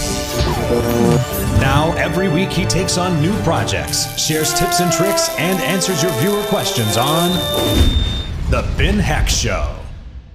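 A feedback whistle runs from 5.12 to 8.36 s: a thin, steady 3.6 kHz tone, roughly 10 dB below the main sound, swelling and fading slowly in level. It is likely a loudspeaker-to-microphone loop held just at the edge of feedback.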